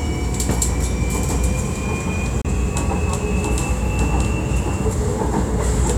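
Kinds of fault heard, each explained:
CD skip: the laser jumped to another turn of the disc spiral, so playback mutes for roughly 30 ms at 2.41 s, then resumes elsewhere.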